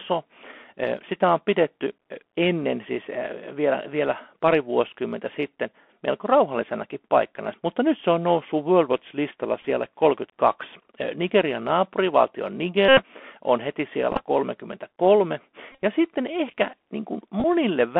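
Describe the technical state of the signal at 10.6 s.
At 10.6 s the speech sounds thin and boxed-in, with scratchy s sounds and a granular hiss beneath, as it does for the whole clip. This is the Bluetooth CVSD headset codec: one-bit up-or-down steps of adapting size that lag on loud high sounds, within a band of roughly 250 Hz to 3.4 kHz.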